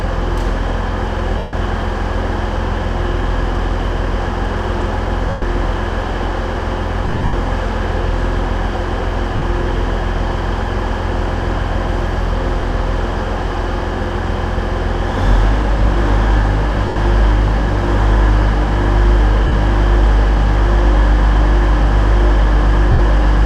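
Lost LE Audio frames occur at 1.38 s (150 ms), 5.29 s (130 ms), 7.07 s, 9.36 s (60 ms), 12.60 s (30 ms), 16.86 s, 19.47 s (50 ms) and 22.92 s (70 ms). At 7.07 and 16.86 s the gaps are scattered over 260 and 100 ms, with no run much beyond 70 ms. The decoder refills each gap by repeating the last spectrum with scrambled phase, so tones smear into hiss that fades during longer losses. That textured fill, rather than a hard cut to silence, separates this from a plain dropout.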